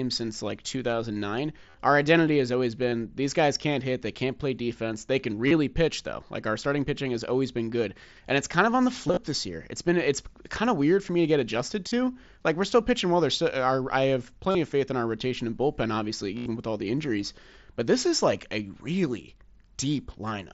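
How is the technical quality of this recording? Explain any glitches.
The recording has repeated dropouts from concealed Bluetooth headset packet loss at 1.70, 2.89, 5.47, 9.08 to 9.17, 11.88, 14.51 and 16.38 s. It comes through a wideband headset link, with light mSBC grain on loud speech.

Each gap, about 30 to 80 ms (longest at 16.38 s), is filled by repeating the closest-matching recent stretch of waveform. It sounds like a brief buzzy hold with a warble on recovery. On a waveform it shows as a periodic, full-level repeating pattern; on a spectrogram, steady horizontal bands of evenly spaced harmonics.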